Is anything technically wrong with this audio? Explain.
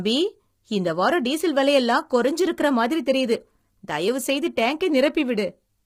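Yes. Low-delay AAC compression damages this speech clip throughout, from start to finish. The codec is likely AAC-ELD at around 24 kbps, the low-delay form used for video calls. Its short frames, about 10 ms at 48 kHz, cannot separate the voice's pitch harmonics cleanly, and at this bitrate the encoder runs short of bits. The damage is heavy: the voice sounds rough and grainy, noise fills the gaps between harmonics, and the top band sounds dulled or synthetic.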